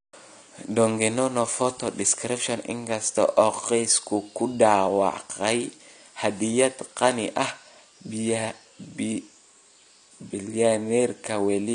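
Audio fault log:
Throughout, AAC compression: the speech sounds dull and smeared, with nothing above 10 kHz and a warbling, fizzy texture on sibilants and held vowels. The likely cause is low-bitrate AAC-LC coding, which fits about 32 kbps, cutting the top band and coarsely quantising the rest.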